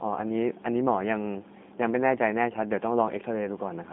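From start to finish the speech carries G.729 codec damage, plainly audible: a slightly rough, synthetic edge, consistent with an 8 kbit/s G.729A encoding. The coder rebuilds each frame from a vocal tract model and a few excitation pulses, so fine detail is lost. On a spectrogram the energy sits in a band of roughly 200 Hz to 3.6 kHz with nothing above 3.8 kHz, a flat ceiling across the whole clip.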